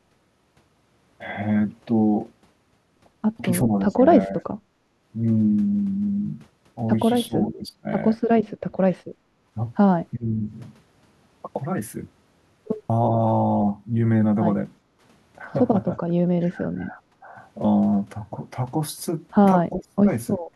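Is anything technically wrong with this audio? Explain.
Yes. Speech suppressed in double talk occurs at 3.87–4.51, 7.27–7.87, 10.16–10.32, 16.07–17.34 and 19.7–20.06 s. The speech dips by roughly 15 to 30 dB or breaks into pieces. The likely cause is an echo canceller that could not separate this talker from the far-end echo and so attenuated both. On a waveform the envelope is notched.

Background gated by the echo canceller occurs at 8.7–9.43, 14.83–15.02 and 20.4 s to the end. While the loudspeaker plays, the canceller pulls the microphone down by about 17, 8 and 14 dB, so the room tone briefly sinks and then returns. A spectrogram shows the noise floor as a dark vertical band across all frequencies.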